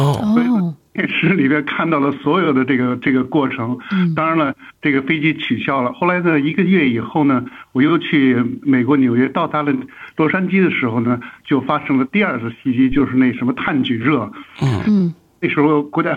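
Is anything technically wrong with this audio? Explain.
Yes. From 12.92 to 13.00 s, a deep thump peaks at about -14 dBFS and decays within 18 ms. This is a phantom power thump, where switching the supply sends a voltage step through the coupling capacitors.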